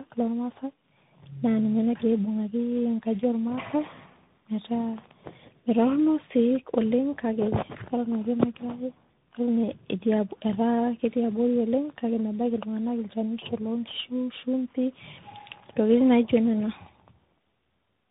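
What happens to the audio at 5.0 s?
At 5.0 s, as throughout, the speech shows tandem speech coding: repeated recoding through successive codecs, likely ending at CVSD, compounds roughness, muffling and warble beyond any single codec, with nothing above 3.8 kHz.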